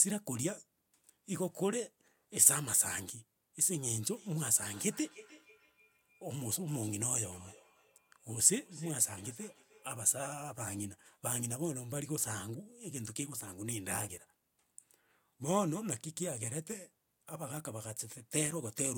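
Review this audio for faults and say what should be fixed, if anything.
From 4.16 s to 10.42 s the speech carries a feedback echo between two devices. Each phrase returns at a steady interval of about 0.3 s, thinner and ringing. The loudest repeats sit about 22 dB below the speech. A second device in the room is replaying this microphone's signal, and the microphone picks it up again. Its echo canceller cannot remove sound from another device. To prevent it, mute or leave the call on the second device.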